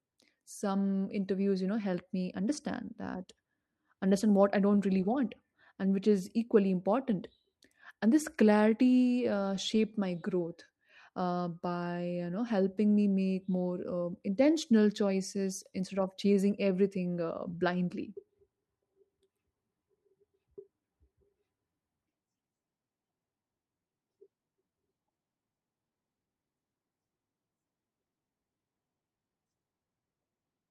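Clock drift between sender and receiver runs through the whole clip, with the sender's clock roughly 2% slow, so the receiver's jitter buffer keeps draining and sounds faintly unsteady. From 0.36 s to 30.3 s you get repeated timing corrections, with short pieces repeated to keep up. That plays at 98% speed, stretching things by roughly 0.7 s, heard as scattered small hiccups.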